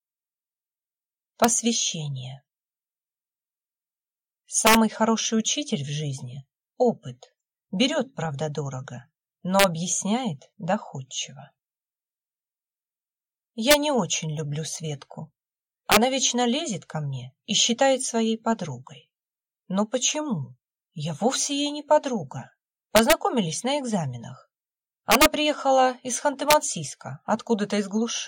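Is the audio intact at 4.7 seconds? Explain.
No, not at that point. Between about 4.67 and 4.75 s there's integer overflow: the signal gets pushed roughly 4 dB past the top of the integer range, and instead of being held at the ceiling those peaks wrap around to the opposite sign. Each over-limit sample jumps clean across the full scale, so you hear harsh, violent cracks on the loud parts, noticeably sharper and nastier than ordinary clipping would sound.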